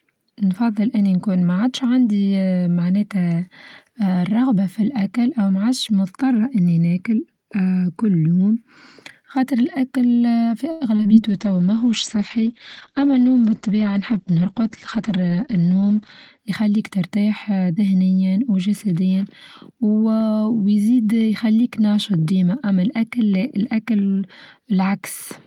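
At 10.71 s the speech hangs for a moment: the sound present at that instant is drawn out until 10.83 s, with a faint buzzy, slightly flattened quality, and then carries on exactly where it left off. This is a short stall from a late packet. The packet due at that point had not arrived, the jitter buffer emptied, and the receiver held the last sound for 93 ms while it waited. Nothing is lost, but the call's delay grows by that 93 ms.

Just after, there are two quick blemishes, from 10.97 to 11.01 s and from 11.03 to 11.06 s, each a brief smear or wobble rather than a clean cut. These are short concealed packet losses. In each case 20 ms of audio never reached the decoder, and the gap was filled by extending the preceding sound before blending back into the real signal. With two so close together, that stretch sounds slightly unsteady.

From 11.27 s to 16.45 s the speech turns rough and muffled, losing its crispness and air. 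This is a call bitrate drop. The bandwidth estimate fell and the encoder went from 32 kbps to 10 kbps, staying at the lowest rate for about 4.9 s. At that rate the coding becomes coarser and the audio band closes from 20 kHz down to 8 kHz, which removes the upper detail until the bitrate recovers.

Within that degraded stretch, from 13.66 to 14.98 s, the speech sounds slightly hurried while its pitch stays the same. This is a jitter buffer speed-up. Too much audio had built up in the buffer, so the receiver repeatedly removed pitch-period-sized slices to bring the delay back down. It played at 105% speed and trimmed away about 70 ms in total, likely much of the delay added by the earlier stall.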